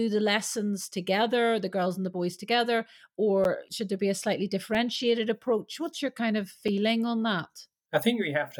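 Three blocks of digital silence drop into this speech. At 3.44 s, right after "and the boys together", about 10 ms of audio drops out. At 4.75 s, after "there be a slightly", a tiny 2.4 ms gap. At 6.68 s, after "your kind of", about 5 ms. The signal cuts out and back with no fade. Gaps this short sound like ticks, not holes.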